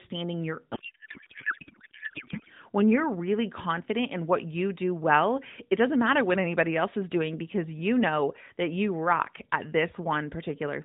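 From 0.74 to 2.50 s the speech collapses into garbled noise and warble that barely tracks it. This is a codec payload misread: octet-aligned AMR frames were decoded as bandwidth-efficient, so every field sits in the wrong place. The narrowband AMR sound, capped at 4 kHz, returns afterwards.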